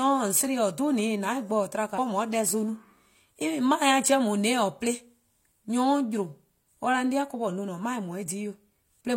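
A speech recording in which, between 1.94 and 1.99 s, the sound abruptly jumps forward with a short blip, so the speech does not continue smoothly from what came just before. This is a stream segment skipped: the delivery was most likely split into segments, one segment failed to arrive or decode, and the player carried on with the next one, closing the gap with only a brief discontinuity in place of the missing stretch.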